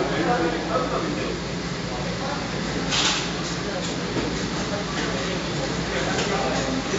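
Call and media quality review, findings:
No faults found: the audio passes through the call's microphone processing and WebRTC codec path as expected, with content limited to about 8 kHz and the usual codec coding noise.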